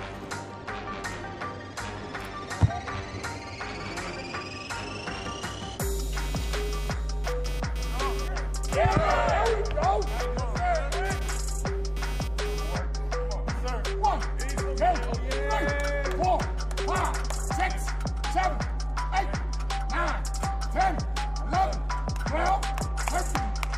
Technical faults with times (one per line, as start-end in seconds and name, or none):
6.13-12.78 computer activity noise